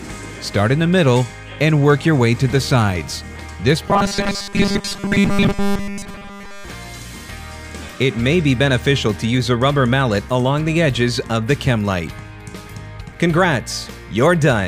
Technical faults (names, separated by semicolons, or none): robotic sound from repeated short buffers